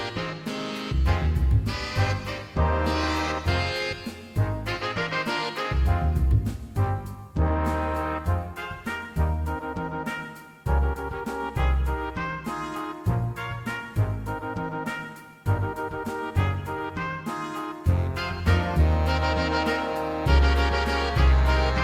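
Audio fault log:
No fault is heard in this audio.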